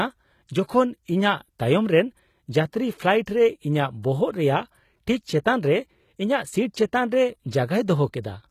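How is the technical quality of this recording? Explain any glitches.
The recording is clearly compressed, with audible damage throughout. A low-bitrate HE-AAC encoder is the likely cause, coding only the lower spectrum and synthesizing the treble by copying lower bands upward. Its misaligned harmonics make s sounds gritty and lispy. Nothing remains above 14.9 kHz, consistent with roughly 20 kbps.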